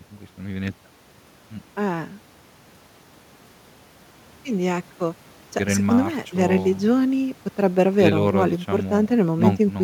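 A speech recording with no technical faults to report.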